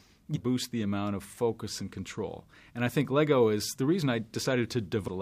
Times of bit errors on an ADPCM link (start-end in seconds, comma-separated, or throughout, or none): none